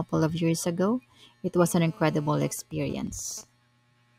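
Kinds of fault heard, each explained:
GSM phone buzz: A 2G phone in a call transmits bursts about 217 times a second, and the audio circuit rectifies them into a hard, raspy buzz rich in harmonics. It runs steadily from 1.66 to 2.52 s, about 24 dB below the speech, unlike the broken-up signalling pattern.
GSM signalling bursts: With the phone still in a call but its user silent, it sends only short groups of bursts, which the circuit rectifies into even ticks with a longer 217 Hz buzz twice a second. This is heard from 2.59 to 3.44 s, roughly 25 dB down, and is intermittent rather than continuous.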